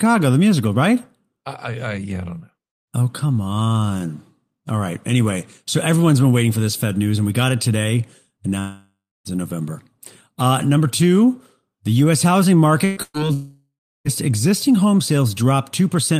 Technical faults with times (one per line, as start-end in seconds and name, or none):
8.59-9.28 long network dropout
12.85-13.29 burst of packet loss
13.33-14.08 long network dropout